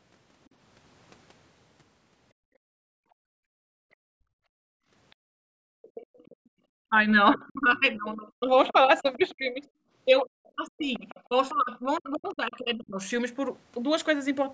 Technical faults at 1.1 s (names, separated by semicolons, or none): none